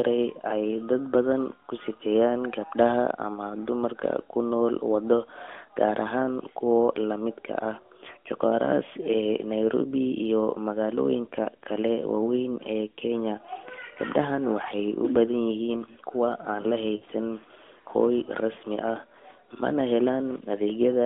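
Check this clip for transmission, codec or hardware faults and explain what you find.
One transmission fault is present, heard through the narrowband AMR path. From 16.96 to 17.04 s, lost AMR speech frames: the decoder stretched the last good frame at falling gain for 60 ms, heard as a short smeared dip.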